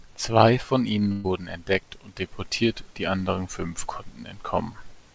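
A burst of packet loss runs from 1.12 to 1.26 s: about 120 ms of audio never arrived, so the receiver stretched the last sound into a fading buzz or hiss. Speech then resumes with that stretch missing, and the call path's codec leaves nothing above 8 kHz.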